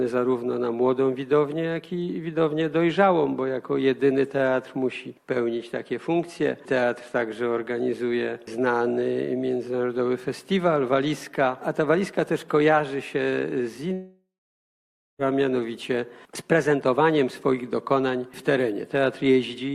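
At 13.93 s the audio turns into a fading buzz that decays to silence, about 0.92 s of it plain quiet, before sound resumes at 15.22 s with about 1.26 s lost. This is likely a long network dropout, with the receiver briefly extending the last sound.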